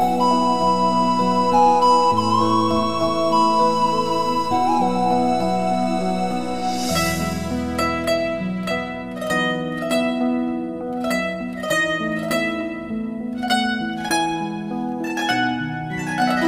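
Dropped samples at 15.75 s: roughly a single sample went missing, most likely, so the waveform jumps straight from one value to a later one. That step is far too brief to remove any sound, but it is heard as one sharp click, a thin vertical line through the spectrum.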